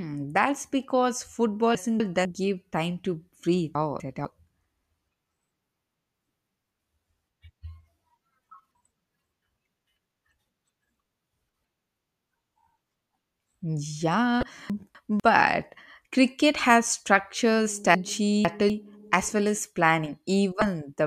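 At 1.75–2.25 s, 3.75–4.25 s and 8.5–9.0 s the speech jumbles briefly: chunks out of order, where a 250 ms block plays one position late, swapping with its neighbour and leaving hard joins. A short glitch at 14.40–14.43 s is damaged data in a compressed stream. The decoder misreads corrupted frames, loses sync and searches for the next frame header. Reordering recurs at 14.70–15.20 s, then at 17.95–18.70 s, where a chunk lands two positions late. A second glitch from stream damage sits at 20.59–20.62 s.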